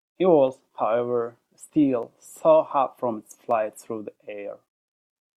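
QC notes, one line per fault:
2.03 s and 3.51 s, dropped samples: the stream likely lost a tiny fraction of a millisecond of data at each point, so the waveform jumps straight from one value to a later one with nothing joining them. That step is far too brief to remove any of the speech, but the sudden discontinuity produces a single sharp click each time, visible as a thin vertical line spanning the spectrum.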